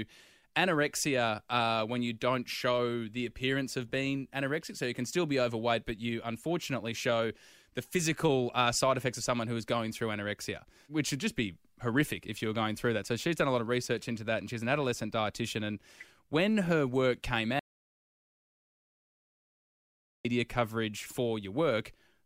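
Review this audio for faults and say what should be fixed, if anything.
The speech breaks off abruptly at 17.59 s and returns mid-flow at 20.25 s, an audio dropout to silence lasting about 2.65 s. The gap is silent with no room tone, which points to the input being lost, likely through a disconnected device or a failed link, while recording carried on writing silence. A natural pause or a noise gate would leave some floor and ease in and out rather than cutting sharply. Secure cables and monitor input levels during capture.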